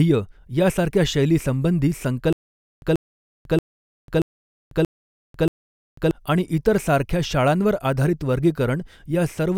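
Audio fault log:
2.33–6.11 s, stutter with silent gaps: right after "यासारख्या शैलीसंबंधी" the same 136 ms burst of speech plays six times. Each burst is followed by about 495 ms of digital silence, so it recurs every 631 ms in an even, mechanical rhythm until the audio resumes at "आणि इतर सारख्या शाळांवर". The likely cause is a stalled player or stream that replays its last buffered fragment on each retry and then runs dry. The speech that belonged in this span is lost.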